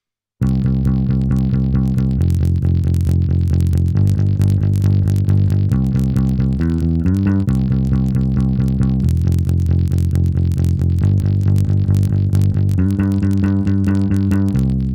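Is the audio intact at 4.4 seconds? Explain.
No. At 4.4 seconds the audio carries the same fault that runs through the whole clip: a filter restarted on every block. The filter discards its internal state at each block boundary and starts again from silence, so every block opens with a small transient. These repeat as a buzz at about 46.9 Hz that rises and falls with the signal's level, a rate that fits a 1024-sample block.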